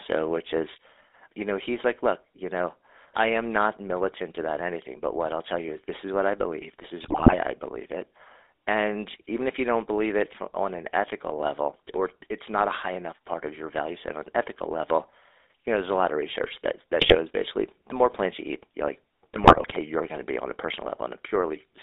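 Throughout, the speech carries the sound of the GSM full-rate codec. The band runs only from about 300 Hz to 3.7 kHz. Nothing above that survives. The codec rebuilds the voice from a vocal-tract filter driven by a sparse, regular pulse train. Only a thinned-out excitation gets through. That leaves a plain buzzy, gravelly roughness on every phrase. The coarseness fits a low bitrate of around 13 kbps.

GSM bit errors strike three times. The first runs from 7.04 to 7.36 s, after "what I believe this" and before "I believe it". The second runs from 17.01 to 17.16 s, between "of research that that" and "basically the more plants". The third runs from 19.36 to 19.77 s, after "eat you like the" and before "you're going to be". In each, corrupted bits reach the decoder. Damaged filter, pitch and gain values warp the spectrum and jolt the level frame by frame. The voice breaks into squawks, pops and gargling. 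The first and third bursts are longer and more broken than the second.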